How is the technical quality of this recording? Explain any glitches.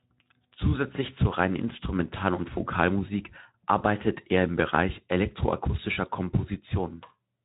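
There are no glitches to point out in the recording. It carries the narrow-band sound of Speex coding at about 15 kbps, with only light codec texture and nothing above roughly 3.8 kHz.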